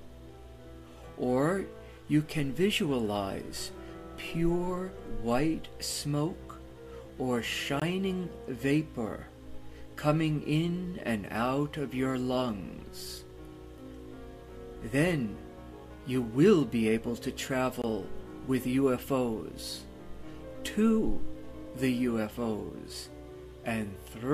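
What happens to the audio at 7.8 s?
At 7.80 s there is a gap between chunks: a hole of about 20 ms where the audio stops and then resumes. It comes from the audio being delivered in pieces, with silence inserted at the join, either from padding in the codec or from playback of the next piece starting late. Unlike a dropout, nothing is missing. The sound picks up exactly where it left off, so the break is a pause in continuity rather than a skip in content.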